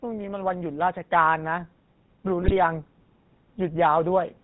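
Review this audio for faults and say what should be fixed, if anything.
GSM full-rate codec damage runs through the entire clip. The speech has the gravelly, buzzy roughness of a vocal-tract model driven by sparse regular pulses, and nothing survives above 4 kHz. The damage is plainly audible and fits a 13 kbps GSM full-rate link.

Automatic gain rising from 0.05 to 2.87 s: the gain control judged the input too quiet and slowly turned it up by about 6 dB. Speech and background swell together across nearly three seconds instead of holding a steady level.

GSM bit errors from 2.42 to 2.57 s: corrupted bits reached the speech decoder, scrambling its filter, pitch and gain values. The speech collapses into squawks, pops and gargling for a stretch that fits about six corrupted frames.

To prevent these, use a wideband codec on a stronger link with error protection, and fix the microphone level so the gain control does not need to ramp.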